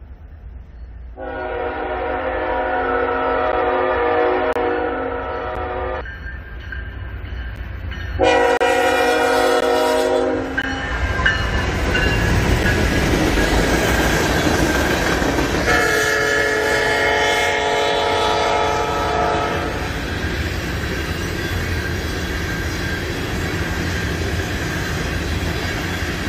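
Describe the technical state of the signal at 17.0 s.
The signal at 17.0 s is intact, with no fault present at that moment.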